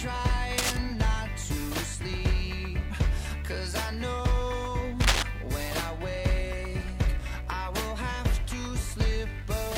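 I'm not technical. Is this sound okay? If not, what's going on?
No. Twice, from 0.58 to 0.77 s and from 5.01 to 5.23 s, a harsh scratching rustle cuts in, about as loud as the sound itself. This is cable scratch noise, likely from a worn cable or plug being moved and briefly losing good contact.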